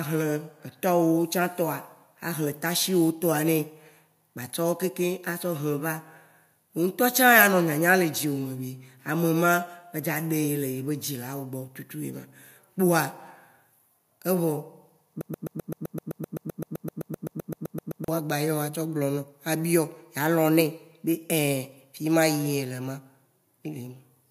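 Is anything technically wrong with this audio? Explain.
Yes. A broken-record loop runs from 15.21 s to 18.08 s. The playback or stream likely stalled and kept re-sending the last fragment it held, so a slice of about 0.13 s repeats exactly, back to back, 22 times. It sounds like a rapid, mechanical stutter, a chattering of the same tiny sound for nearly three seconds. Whatever speech should have played in that span is gone.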